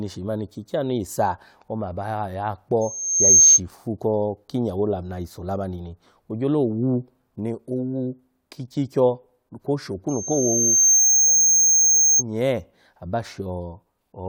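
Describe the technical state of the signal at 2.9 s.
At 2.9 s you're right inside a loudspeaker feedback squeal running from 2.81 to 3.60 s. The mic is catching its own speaker, and the loop runs away at 6.4 kHz, swelling over about half a second into a piercing whistle roughly 15 dB above the speech.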